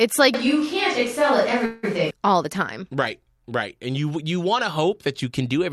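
From 0.34 to 2.11 s the speech turns roomy and hollow, with thinner bass, similar level and room noise roughly 25 dB below it, likely a switch to a distant microphone. At 1.65 s a fading buzz or hiss fills about 176 ms before the speech resumes unbroken and later, likely a call audio freeze from delayed packets emptying the jitter buffer.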